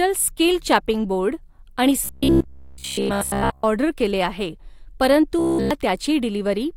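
Robotic sound from repeated short buffers runs from 2.05 to 3.65 s, just after "स्कील चँपिंग बोर्ड आणि", and again from 5.39 to 5.71 s. The speech collapses into a rigid, metallic buzz near 66.8 Hz that still loosely tracks the words. The likely cause is audio arriving too slowly, so a chunk of roughly 15 ms is replayed in place of missing sound. That covers most of the first stretch and all of the second.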